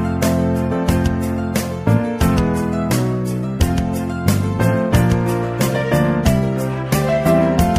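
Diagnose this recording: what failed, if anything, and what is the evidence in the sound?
A drift correction step runs from 2.37 to 3.44 s. The sound slows by 5.3% and drops about 94 cents, nearly a semitone, then snaps back to pitch. This is likely a clock-matching resampler at the buffer stage abruptly lowering the playback rate to refill its buffer.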